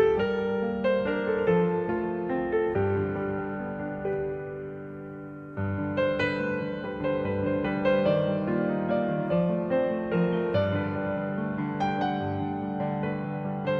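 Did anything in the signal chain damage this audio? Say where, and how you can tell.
No, no signal-chain damage detected.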